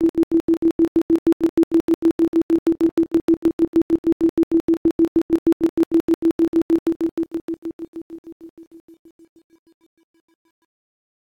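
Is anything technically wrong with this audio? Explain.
Yes. From 6.72 s to the end at 11.35 s, the fade-out shows truncation distortion. The fade starts at around 6.7 s and runs to 11.3 s, but the gain stage drops the low bits with no dither, which fits a 9-bit word length. As the level sinks toward the smallest step, the waveform collapses into coarse square steps. From 8.18 s onward the tail turns gritty. A noise gate would chatter at a fixed threshold. This grit instead tracks the fade and gets worse as the level falls. It is also distortion that follows the signal, not the steady hiss that dither would leave.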